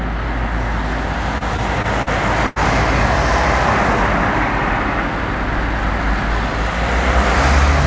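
Between 1.38 and 2.08 s the audio shows repeated stalls (stutter). Packets arrived late, so the jitter buffer emptied four times in quick succession. Each time the receiver extended the last sound until data caught up, covering about 106 ms in total, with the longest gap 44 ms. Nothing is lost, but around 15 percent of that stretch is filled-in sound, so the everyday sounds here drag and jerk unevenly instead of flowing.

From 2.46 to 2.58 s there is a short stall from a late packet. A single packet missed its playout time, and the delay jumped by 96 ms. The receiver held the preceding sound for that 96 ms, then resumed exactly where it stopped, so no material is skipped. The result is one sound sustained too long, with a faint buzzy quality or slight dip where the concealment stretches it. The call path carries nothing above 8 kHz, which fits a G.722 codec at 64 kbps.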